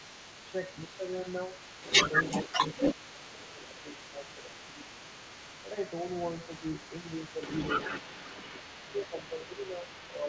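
A second voice runs under this speech recording for its whole length, sitting only a few decibels below the main talker: other side's voice leaking through, likely because the far end's loudspeaker playback reached the microphone and the echo canceller left a residue. The main voice also dips by roughly 5 to 10 dB, sounding duller or broken, at 0.87–1.04 s, 2.47–2.51 s, 2.94–4.9 s, 6.46–6.65 s, 7.02–7.42 s and from 8.52 s to the end. This is speech suppressed in double talk, likely the canceller turning everything down while both sides spoke at once.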